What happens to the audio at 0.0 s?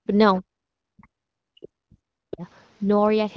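From 0.0 to 0.07 s the background is gated by the echo canceller: it turns the microphone down, by about 40 dB at its deepest, while the far-end loudspeaker plays. The room sound briefly vanishes, showing as a near-flat waveform and a blank strip across the spectrogram.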